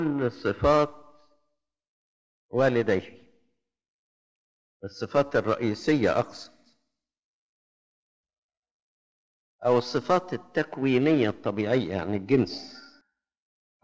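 No technical faults are audible.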